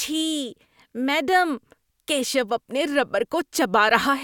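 No technical faults can be heard anywhere in the speech. At no point does the audio break, stall or change in a way that points to a problem in how it was captured or delivered.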